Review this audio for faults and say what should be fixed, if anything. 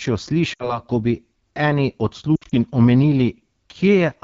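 The speech sounds rough and raspy throughout, with a noisy hiss in the top band. This is the AMR wideband (HD Voice) codec working at one of its lowest rates, which points to about 8.85 kbit/s. At that rate the pulse-driven vocal tract model lacks the bits to reproduce the voice cleanly. Fix it by running the call at 12.65 kbit/s or higher.

Lost AMR speech frames cause two breaks. From 0.53 to 0.80 s, about 60 ms of speech smears and then sinks away. From 2.36 to 2.55 s, losses totalling 100 ms are scattered over about 160 ms, with the longest gap at 60 ms. That sounds like a broken warble. In both places the decoder repeated its last good pitch and vocal tract settings with falling gain, and the voice came back rough. Fix it by improving radio link quality or adding error protection so frames pass their checksum.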